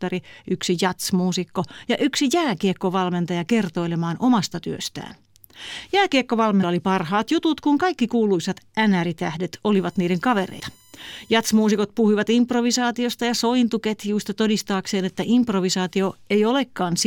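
At 6.62 s, just before "oli parhaat jutut kun", a brief glitch marks damaged data in a compressed stream. The decoder misreads corrupted frames, loses sync and skips ahead to the next frame header. This leaves a short broadband smear on the spectrogram and a small discontinuity in the waveform.

From 9.76 to 11.78 s, ending before "puhuivat improvisaatiosta ja sointuketjuista", USB whine sits far below the speech. It is a steady tone built on 1 kHz and is strongest at 7 kHz. On a spectrogram it shows as flat horizontal lines at those multiples. The likely cause is current drawn in 1 ms USB frames leaking in through power or ground.

At 10.59 s, inside that whine, a second glitch of damaged stream data appears as another brief blip and vertical smear.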